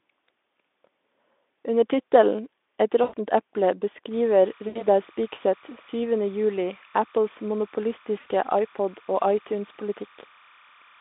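VoIP packet loss concealed by the speech codec at 3.03–3.14, 4.67–4.83 and 8.19–8.28 s: the decoder stretches the last sound into a fading buzz, slow to recover.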